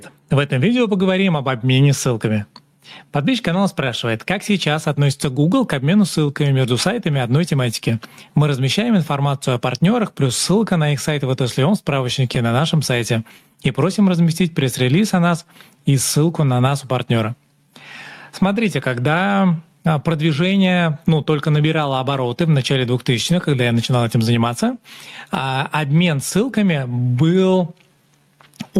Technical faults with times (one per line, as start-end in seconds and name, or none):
0.00-28.80 gain pumping
0.00-28.80 clock drift between sender and receiver
0.20-28.51 repeated timing corrections
12.35-16.73 scattered short gaps